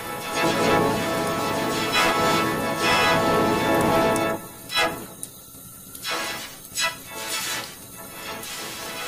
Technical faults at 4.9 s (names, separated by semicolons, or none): none